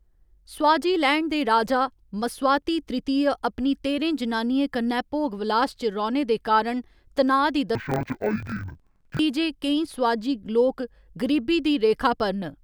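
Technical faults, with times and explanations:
7.75 to 9.21 s, interleaved audio read as planar: the speech drops an octave and sounds doubled and choppy, ending just before "जे केईं स्वाजी लोक". Each 23 ms block was split into halves played together at half speed, which fits 1024-sample blocks.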